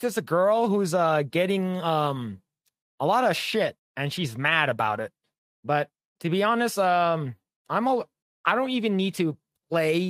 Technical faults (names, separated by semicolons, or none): none